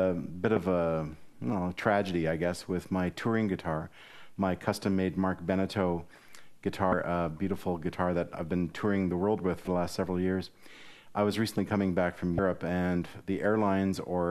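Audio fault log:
0.56 s, 6.90–6.93 s, 9.64–9.67 s, 12.36–12.39 s: damaged data in a compressed stream. Corrupt bytes throw the decoder out of sync while it hunts for the next frame header, causing brief chirps or blips of about 6 to 34 ms.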